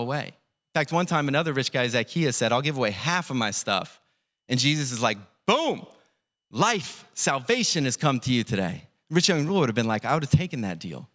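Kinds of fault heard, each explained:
No technical faults can be heard in this speech recording, and the signal holds steady throughout.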